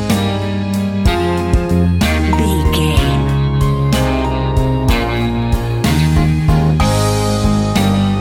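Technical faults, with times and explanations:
Nothing stood out on listening; no technical problem could be heard anywhere in the audio.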